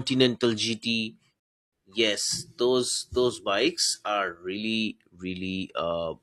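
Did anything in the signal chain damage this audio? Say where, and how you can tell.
Yes, at the playback stage: the player's buffer ran dry and it paused until more audio arrived, a rebuffering stall. The speech drops to silence at 1.40 s and picks up at 1.73 s exactly where it stopped, so nothing is lost but 328 ms is added.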